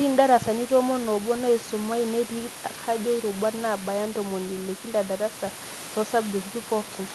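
No faults detected: room noise sits about 16 dB below the speech, and the top end stops near 12 kHz, consistent with an Opus call path running at roughly 64 kbps.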